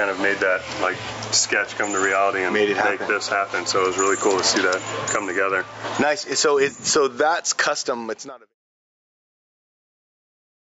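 Throughout, the level ducks hard under each loud sound, swinging by something like 20 dB and squashing loud and soft parts together. This is gain pumping, likely from input gain set far too high with a fast limiter clamping each peak. The audio has passed through call microphone processing, with nothing above 8 kHz, and fades out smoothly from around 7.5 s to 8.55 s.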